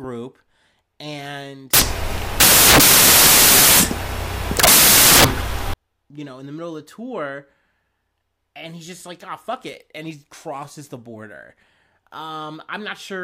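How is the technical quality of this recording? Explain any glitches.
The recording has one serious glitch. From 1.74 to 5.74 s, samples built from the wrong bytes give loud, harsh noise, close to white on louder speech, unlike steady hiss.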